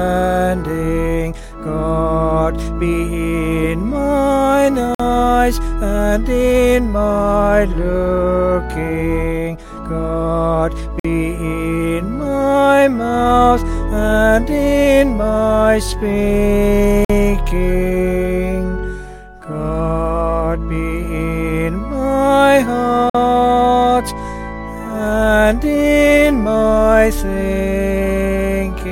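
At 4.95, 11.0, 17.05 and 23.1 s a gap between chunks opens: a 50 ms silent hole with hard edges that recurs every 6 s of audio. Unlike a dropout, nothing is missing; the sound pauses and resumes exactly where it stopped.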